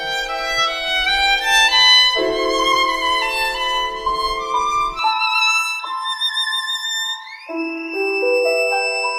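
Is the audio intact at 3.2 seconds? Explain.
No. Timecode bleed runs through the whole music clip, including 3.2 s: linear timecode from a neighbouring track leaks in as a square wave flipping between roughly 1 and 2 kHz, framed at 23.976 per second, faintly chirping about 35 dB under the music. Unlike a steady whine, it warbles between two pitches.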